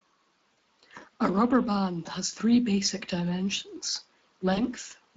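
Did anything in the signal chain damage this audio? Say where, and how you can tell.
Yes. Two faults come from the codec and network stages of a voice call.

The Speex codec leaves its mark across the whole clip. The speech has a plainly audible hoarse, noisy texture because the CELP coder has too few bits to model the excitation cleanly. The rate it points to is roughly 20 kbps. Unlike MP3-style smearing or warbling, the roughness sits in the voicing itself. This is typical of a speech-model codec rather than a transform codec.

VoIP packet loss concealed by the speech codec appears three times: 0.53–0.57 s, 2.03–2.07 s (just after "rubber band", before "has three basic dimensions"), and 4.53–4.60 s (just after "has three basic dimensions"). Each gap fits one or two lost 20 ms frames. The decoder bridges them by repeating its last pitch and filter at falling gain, so each gap is a brief, fading smear of buzzy tone or coloured noise rather than silence or a click. 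That sets it apart from plain dropouts or buffer glitches.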